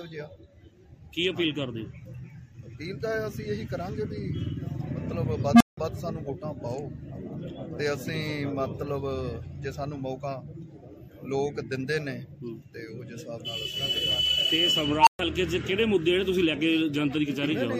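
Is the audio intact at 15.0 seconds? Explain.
No. An unstable filter runs from 14.97 to 15.19 s: a recursive filter with bad coefficients feeds back on itself, so a tone around 1 kHz swells over about 98 ms into clipping, overflows, and leaves roughly 125 ms of silence.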